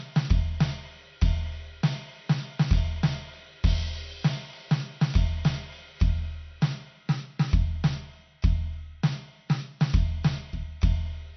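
Throughout the music, the encoder appears starved of bits, likely from MP3 compression at a low rate, around 48 kbps. It discards everything above 6.1 kHz, leaving the top end dull, and its plainly audible damage gives a watery, swirling texture with smeared attacks.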